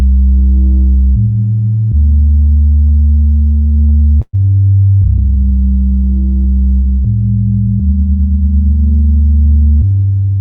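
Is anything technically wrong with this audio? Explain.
Yes. Three jitter-buffer faults affect this clip, which arrives through a call path whose high end stops around 8 kHz, consistent with an Opus codec at about 32 kbps.

From 2.45 to 4.35 s there are repeated stalls (stutter). Packets reached the receiver late or more slowly than playback consumed them, so the jitter buffer emptied 13 times. At each gap the receiver extended the last sound until fresh data arrived, filling 281 ms in total, about 15% of that span, with the longest gap at 115 ms. Nothing is actually lost, but the sound drags and hiccups audibly.

From 5.08 to 5.50 s there is a jitter buffer slow-down. With its reserve running low, the receiver rebuilt it by repeating short periodic segments many times in succession, adding 62 ms. Playback runs at 87% speed while the pitch stays the same, so this stretch sounds drawn out and slightly sluggish.

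From 7.67 to 8.44 s there is a jitter buffer speed-up, the opposite correction. The buffer held more audio than its target, so the receiver trimmed short periodic pieces repeatedly, removing about a tenth of a second. Playback runs at 111% speed with unchanged pitch, making that passage sound hurried.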